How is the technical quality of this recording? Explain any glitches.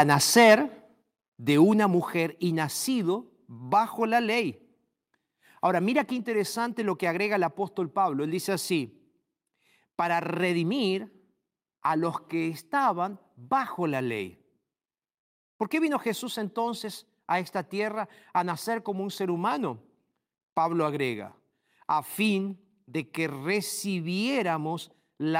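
The recording opens with a clipping problem and then two abrupt level drops. Beyond those faults, I won't judge the rest.

From 0 to 0.54 s there is microphone overload. The loudest speech peaks sound harsh and crackly, with a gritty edge on the strongest syllables. The input appears to be driven about 4 dB past full scale. A few percent of samples are flattened at the ceiling. The likely cause is microphone input gain set too high, so the converter cuts off the tops of the waveform.

At 1.02 s and again at 2.04 s the microphone volume steps down. Each time, voice and background fall together in one sudden jump, about 5 dB at 1.02 s and about 3 dB at 2.04 s. There is no gradual fade. This sounds like the call software likely reacting to the earlier overload and lowering the device's input level in discrete steps.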